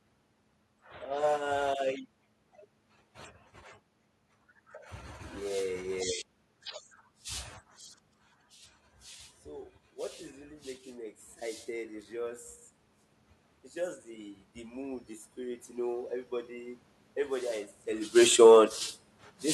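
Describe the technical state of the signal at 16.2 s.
At 16.2 s the automatic gain is rising. Between 13.73 and 17.57 s the gain control, judging the input too quiet, lifts its level gradually by about 6 dB. The voice and the room noise swell together, which a talker moving closer would not do.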